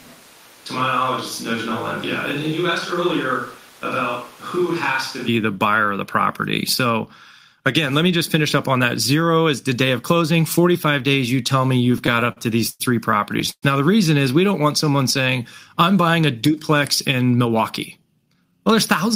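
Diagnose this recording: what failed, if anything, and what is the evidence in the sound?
From the start until 5.28 s the speech is roomy and hollow, about 5 dB quieter, with room noise only about 25 dB below it. This is likely a switch to a distant microphone at the capture stage. On a spectrogram the low end is thinner and reverberant smearing trails each syllable.

Between 11.85 and 12.82 s there are repeated stalls (stutter) at the network and jitter-buffer stage. Ten short gaps, the longest 103 ms, total about 220 ms. Each is filled by continuing the last sound. The waveform shows repeated held fragments, with no audio missing.

At 13.51 to 13.64 s there is a call audio freeze of 111 ms, likely from packets held up in the network. The last sound is stretched into a fading buzz, then about 60 ms of near-silence. The spectrogram shows a smeared band decaying into a blank strip.

From 14.47 to 15.37 s a jitter buffer slow-down runs the speech at 94% speed, adding 66 ms while the pitch stays the same. 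Repeated pitch periods draw sounds out. On a spectrogram the harmonic spacing holds while segments lengthen.

From 17.31 to 18.59 s a jitter buffer speed-up plays the speech at 110%, removing roughly 150 ms by cutting short pitch-period pieces to reduce delay. It sounds hurried at unchanged pitch. The waveform shows compressed syllables, and the spectrogram keeps the same harmonic spacing.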